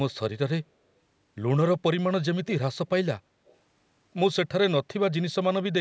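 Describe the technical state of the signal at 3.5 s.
Echo leak from 3.46 to 3.56 s: a brief, faint copy of the speech surfaces 216 ms behind the original, roughly 35 dB below it. The likely cause is a far-end loudspeaker whose echo canceller let a scrap of its microphone pickup return down the line.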